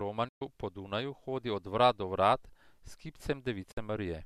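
At 0.28 s and 3.71 s, digital broadcast dropouts mute the speech for 120 ms and 48 ms after 8 ms fades. The waveform goes flat, and the spectrogram shows empty vertical gaps.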